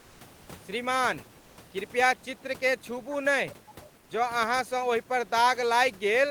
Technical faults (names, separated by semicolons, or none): comfort noise in place of the background; echo leak